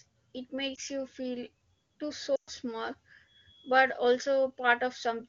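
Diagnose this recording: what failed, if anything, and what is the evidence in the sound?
Lost AMR speech frames on the radio link: a brief dip or warble at 0.75 to 0.80 s, and a stretch that drops to near silence within two frames at 2.36 to 2.50 s. The decoder repeated its last good pitch and vocal tract settings with falling gain, so a spectrogram shows frozen, dimming harmonics and a waveform envelope that sags.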